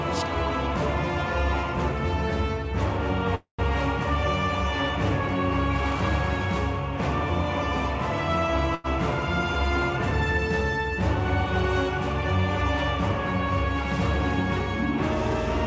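At 3.35 s the audio stalls in what sounds like a call audio freeze, lasting until 3.62 s. The last sound carries on as a fading buzz or hiss for about 240 ms, the final 120 ms of it dropping to silence. The likely cause is packets held up in transit until the jitter buffer ran dry. When playback resumes it picks up exactly where it stopped, so nothing is lost. Everything after this point arrives about 240 ms later than before.

From 8.75 to 8.87 s there is a burst of packet loss. A run of packets never arrived in time, and the receiver filled roughly 90 ms by extending the last sound and letting it fade. The audio then jumps ahead instead of resuming in place, so about 90 ms of the original material is gone. Across the clip the G.722 call path leaves nothing above 8 kHz.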